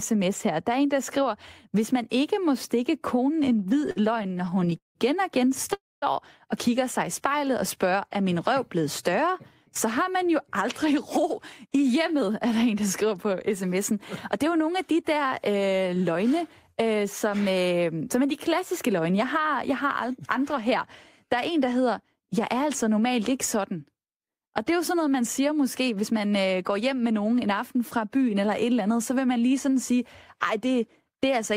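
Repeated stalls (stutter) run from 3.49 to 4.97 s, between "ikke må stikke konen" and "og igen". Packets kept arriving late, so the jitter buffer emptied 21 times. Each gap was bridged by stretching the last sound, the longest for 176 ms, adding 417 ms in all. The speech drags and stutters but loses nothing.

A call audio freeze follows at 5.73 to 6.04 s. The sound hangs as a short fading buzz or hiss, then drops to silence for about 230 ms before resuming where it stopped. The likely cause is packets held up in transit, leaving the buffer empty and inserting a 290 ms gap.

Jitter buffer slow-down appears at 7.28 to 7.97 s, after "og kigger sig i" and before "er min røv blevet". To rebuild its reserve, the receiver repeated single pitch periods, adding 43 ms. The speech runs at 94% speed with unchanged pitch and drawn-out sounds.

Jitter buffer speed-up occurs three times: 9.84 to 13.91 s, starting after "min røv blevet større", at 105% speed with about 200 ms cut; 14.36 to 15.25 s at 110%; and 25.81 to 26.81 s at 108%, each losing about 100 ms. 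The receiver trimmed short pitch-period pieces to cut excess delay, so the speech sounds hurried at the same pitch.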